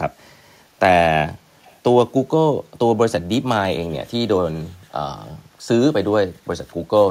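From 1.63 to 1.79 s a short echo leak can be heard: a very faint, delayed copy of the speech arriving about 331 ms after the original and well below it in level. The likely cause is a far end playing the call over a loudspeaker, where the echo canceller failed to fully suppress what its microphone picked up, so a brief residue was transmitted back.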